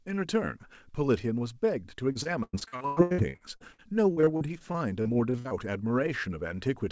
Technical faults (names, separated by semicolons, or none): repeated packet loss (robotic sound)